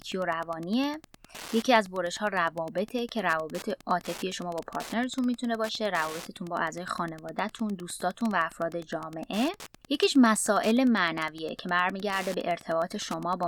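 A nearby Wi-Fi radio is coupling into the audio circuit, which rectifies the radio's beacon transmissions and turns them into audible clicks. The result is Wi-Fi interference running under the speech for the entire clip: a steady, mechanical ticking with a 102.4 ms period, just under ten ticks per second, sitting roughly 20 dB below the speech. Its strict regularity sets it apart from the talking.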